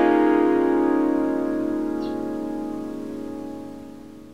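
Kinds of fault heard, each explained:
No technical fault can be heard anywhere in this recording of sounds, with the signal arriving intact and continuous throughout.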